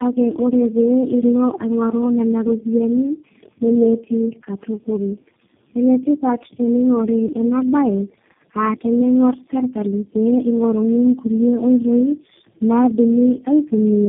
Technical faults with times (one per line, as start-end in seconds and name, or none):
0.00-14.09 tandem speech coding